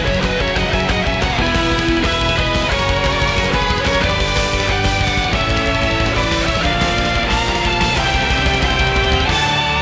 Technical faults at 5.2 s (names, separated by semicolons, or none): none